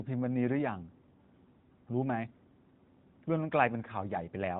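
No technical faults can be heard in this speech recording. It carries the narrow, telephone-like sound of the AMR narrowband mobile codec, with nothing above 4 kHz and only light coding texture, which fits its highest 12.2 kbps mode.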